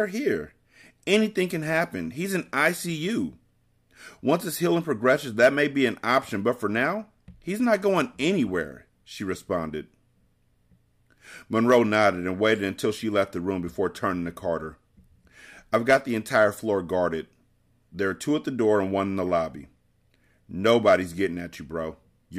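Just after "his healing", from 4.92 to 8.34 s, the speech picks up a crude rate conversion: samples were resampled by straight linear interpolation with no filtering, which fits a 48 kHz to 44.1 kHz change. The leftover error, roughly 45 dB below the speech, lands on tones unrelated to the voice, so a faint gritty fizz rides on loud and sibilant moments. Unlike codec swirl, it tracks signal level rather than smearing in time.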